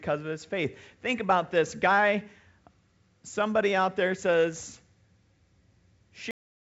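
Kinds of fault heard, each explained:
Cut-off end: at 6.31 s the speech breaks off in the middle of a sound and falls straight into digital silence with no decay for the last 0.33 s. The final buffers were never written or played, so the audio is truncated rather than finished.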